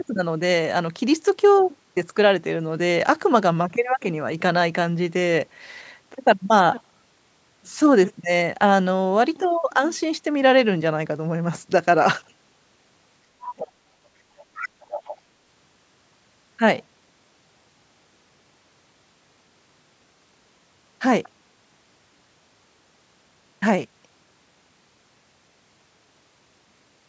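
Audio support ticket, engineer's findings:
Speech suppressed in double talk, 13.36–13.74 s: talker drops hard, something like 35 dB down for roughly 0.4 s. Echo canceller likely confused by both sides talking at once and ducked everything.

Other side's voice leaking through, 14.37–15.17 s: far-end talker audible, roughly 15 dB under near-end speech. Likely residual loudspeaker echo the canceller didn't fully subtract. Band tops out at 8 kHz.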